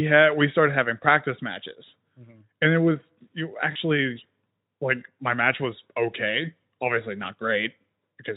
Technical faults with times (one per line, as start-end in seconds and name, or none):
3.71-3.76 VoIP packet loss concealed by the speech codec